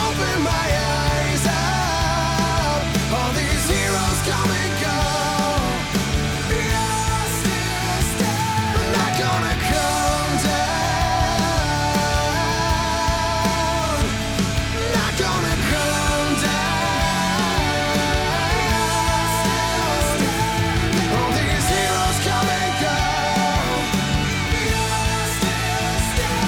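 No technical faults can be heard anywhere in the clip, so there is nothing to describe in time order.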